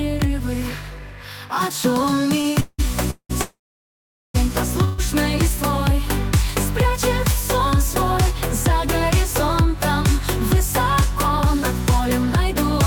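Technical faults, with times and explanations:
2.41–2.46 s, short stall from a late packet: a packet arrived behind schedule, so the receiver stretched the last bit of sound for about 27 ms until it came in, then continued from the same point. Nothing is lost, but that brief sound is held slightly too long, heard as a small smear with a slight buzz or dip. Everything after it runs 27 ms later than before.
2.60–2.80 s, 3.10–3.31 s, 3.41–4.36 s, 4.84–5.00 s, call audio freeze: each time the sound stops moving forward and the last fragment carries on as a fading buzz or hiss, then picks up exactly where it left off, so a gap is inserted and nothing is skipped. The held stretches are 183, 189, 929 and 138 ms. The sound dies to silence for about 30 ms, 80 ms and 770 ms in the first three and doesn't fully fade in the last. The likely cause is packets delayed in transit, emptying the jitter buffer, with about 1.4 s of added delay over these four.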